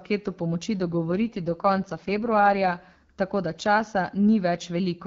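From 0.80 to 2.72 s, just before "tako da", an AMR rate drop turns the speech rough and synthetic, which fits a drop from 12.65 to 6.6 kbit/s. Unlike a dropout or band narrowing, there is no gap and no loss of treble.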